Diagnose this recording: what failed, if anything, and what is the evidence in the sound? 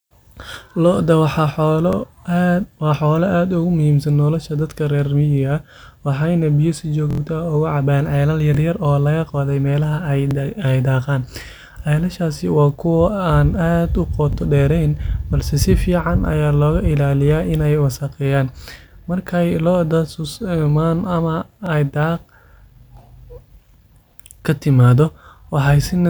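Stutters at 1.93, 8.55, 10.31, 14.33 and 21.66 s, each a 23 ms slice doubled with a hard join, and a longer stutter at 7.11 s after "waxayna biyo si". Repeated buffer at the driver stage: audio arrived late, so the device replayed its last block, which fits a 1024-sample buffer.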